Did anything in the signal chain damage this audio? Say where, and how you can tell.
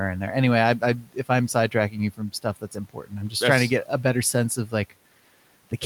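Yes. The damage is in call processing, where speech was cut by the noise suppressor. It happens three times. From 0.79 to 1.15 s, just before "if I'm", the sound drops by about 12 dB. From 1.54 to 1.97 s, right after "if I'm", it drops by about 10 dB. From 2.61 to 3.14 s, just before "I'm just that's trying", it drops by about 12 dB. Each time the level dips for a short stretch and the sound turns faint and swallowed. The suppressor mistook that quiet speech for noise and gated it with the room noise, which sits about 28 dB below the speech.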